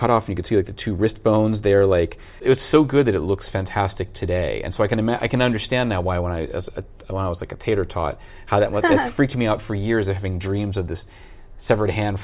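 No technical faults are audible.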